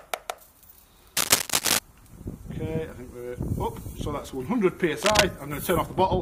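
From 1.17 to 1.79 s, a burst of cable scratch noise rides over the sound. It returns from 5.01 to 5.24 s. Both bursts are dense, uneven and crackly, a little louder than the sound itself. A worn cable or connector being moved is the likely cause.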